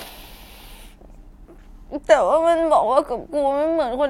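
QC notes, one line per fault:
No faults found in this speech clip.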